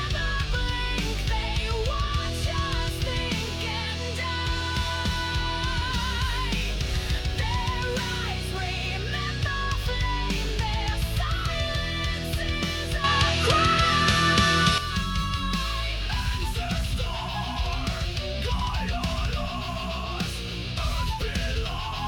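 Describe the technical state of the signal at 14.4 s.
At 14.4 s the sound is duller, with nothing above 11.8 kHz, a level shift of roughly 5 dB and faint new noise, from 13.04 to 14.78 s. The likely cause is an input switched to a poorer device.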